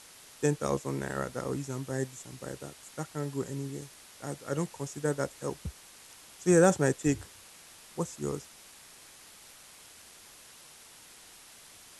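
Throughout the speech, the signal has been rounded to very few levels, consistent with about 7 bits, with dither added first. The rounding error becomes a steady white hiss sitting roughly 20 dB below the speech, even and constant, without distortion.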